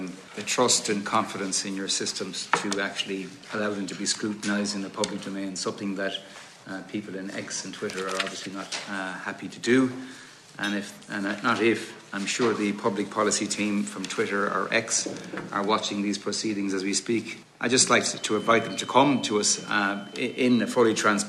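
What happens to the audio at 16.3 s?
Nothing goes wrong at 16.3 s; the audio plays through that moment intact.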